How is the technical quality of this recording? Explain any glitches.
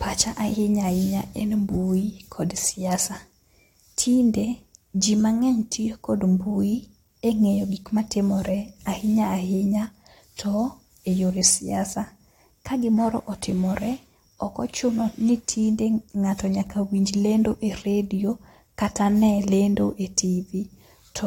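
Nothing here stands out as a glitch at all; the recording holds steady from beginning to end without a single technical hiccup worth pointing to.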